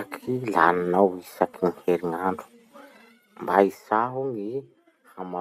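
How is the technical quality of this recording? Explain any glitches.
One glitch stands out in the speech: zipper noise during a level drop.

From 3.5 to 4.28 s, the level falls by about 15 dB in coarse unsmoothed steps, roughly fifty per second, each leaving a small click heard as a zipping rattle.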